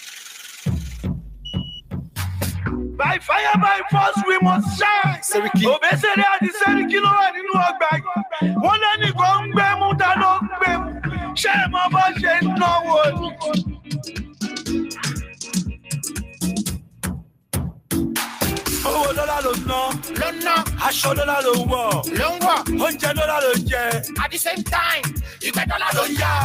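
Throughout the clip a noise suppressor designed for speech is working on sound it was never meant for. It treats steady, sustained material and any ambience or reverb as noise and pulls them down, while sharp onsets pass almost untouched. The level keeps swinging by around 5 dB, so the sound pumps and thins out. On a waveform the envelope ripples unevenly. On a spectrogram, sustained bands flicker and fade while transients stay bright.

At several points the suppressor cuts the sound itself far harder. This happens at 1.6 to 2.19 s (about 12 dB down), 13.77 to 14.69 s (about 17 dB), 15.77 to 16.43 s (about 17 dB), 16.78 to 17.52 s (about 18 dB), 17.73 s to 17.9 s (about 18 dB) and 25.27 to 25.42 s (about 14 dB). Each time, held or decaying sound sinks abruptly or its tail is chopped short. The waveform shows sudden notches in the envelope. The spectrogram shows dark gaps punched across the sustained energy.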